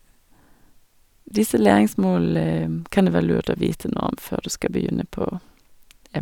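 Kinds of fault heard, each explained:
No technical faults can be heard anywhere in the signal.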